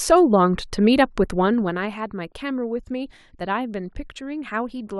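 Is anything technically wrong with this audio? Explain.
Yes, there's zipper noise between 1.42 and 2.02 s in this speech clip. The level drops by about 10 dB there, but instead of gliding down it falls in hard steps of about 2 dB, around fifteen of them a second, with nothing smoothing the jumps. Each step puts a tiny discontinuity in the waveform, so you get a fast ticking, zippery texture riding on the speech while the level comes down.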